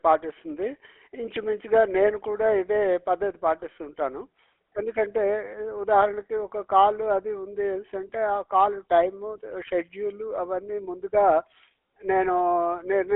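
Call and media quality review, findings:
GSM full-rate codec, whole clip. Buzzy, gravelly roughness on speech. Band limited to roughly 300 Hz to 3.4 kHz. Consistent with 13 kbps GSM full rate. Vocal-tract model driven by sparse regular pulses, so excitation detail is coarse. Damage plainly audible.

Lost GSM frames, 3.60 to 3.63 s. Brief rough, metallic ring. Fits a single lost 20 ms frame. The decoder repeated the last good frame's settings to fill the gap. Probable component is the radio link.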